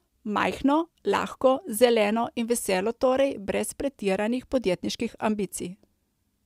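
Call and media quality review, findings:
Nothing stood out on listening to the speech in this recording.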